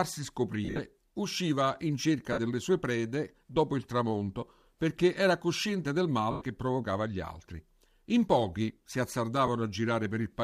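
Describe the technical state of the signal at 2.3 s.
From 2.33 to 2.39 s the speech turns into a brief noisy, grainy smear before picking up again. This is lost LE Audio frames: the LC3 decoder fills the gap by reusing the last spectrum with randomised signs. The 50 ms dropout fits about five lost 10 ms frames, likely on a Bluetooth LC3 link.

A steady 43.1 Hz buzz runs underneath, there as everywhere in the clip. That is a block size mismatch (truncated): one stage writes longer blocks than the next reads and the tail of each is discarded, a rate that fits 1024-sample blocks.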